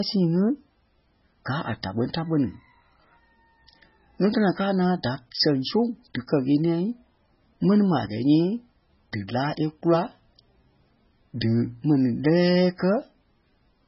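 Throughout the clip the speech sounds watery and swirly, with nothing above 5.6 kHz, so sibilants lose their hiss. The likely cause is heavy MP3 compression. Short of bits, the encoder zeroes weak frequency lines that flicker between frames, which fits a bitrate around 16 kbps.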